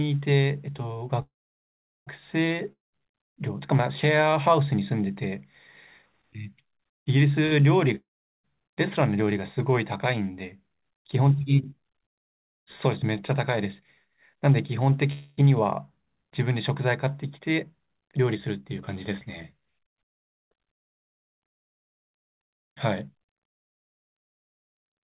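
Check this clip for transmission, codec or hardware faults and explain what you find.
Several network faults are present, all on a call path whose sound stops near 4 kHz, which fits G.711 mu-law at 64 kbps.

Call audio freeze, 1.22–2.09 s and 15.12–15.39 s: a fading buzz fills the wait, with about 0.76 s of silence in the first. The likely cause is a stalled jitter buffer. Nothing is lost, unlike a dropout.

Long network dropout, 2.73–2.94 s and 7.96–8.45 s: after a brief fading tail, the sound goes silent and resumes about 0.2 s and 0.48 s further on. This is likely packet loss. Speech is skipped, not delayed.

Short stall from a late packet, 7.46–7.54 s: one sound is held about 52 ms with a slight buzz or dip, then continues intact. It is too brief to go silent, unlike a freeze.

Jitter buffer speed-up, 17.39–20.66 s at 106% and 22.02–25.14 s at 119%: speech sounds hurried but keeps its pitch, as roughly 0.2 s and then 0.7 s are trimmed in small pieces.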